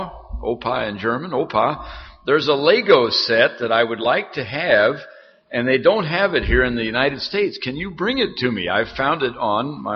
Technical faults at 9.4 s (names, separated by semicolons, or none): none